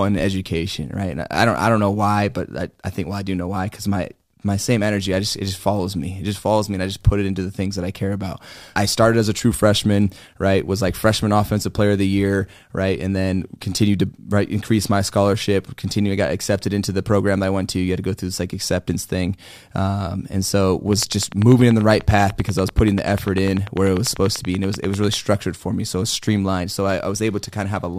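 A speech clip with a train of clicks from 20.93 to 25.15 s, after "thing um and so". Regular ticks come at about 10.2 per second, roughly forty, standing well above the speech. Likely interference or a faulty connection. They end before "for me".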